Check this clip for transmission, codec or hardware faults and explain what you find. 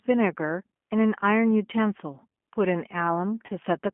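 Two faults are audible: narrowband low-bitrate speech coding across the whole recording, and one short concealed dropout near the end.

The G.729 codec damage runs throughout and is plainly audible. The speech sits in a telephone band of about 200 Hz to 3.4 kHz, so it sounds thin and muffled at the top. G.729 rebuilds each 10 ms frame from a vocal-tract filter, a pitch predictor and a handful of coded pulses, and the roughness and slightly synthetic edge on the voice are consistent with that scheme at 8 kbit/s, likely the G.729A variant.

VoIP packet loss concealed by the speech codec occurs from about 3.46 to 3.50 s. Roughly 30 ms of signal is missing, consistent with a single lost packet. The decoder fills the gap by repeating its last pitch and filter state at falling gain, so the sound there smears into a buzzy tone or coloured noise that fades instead of a clean cut. Because each frame depends on the one before, the speech stays weak or distorted for a short time after the gap.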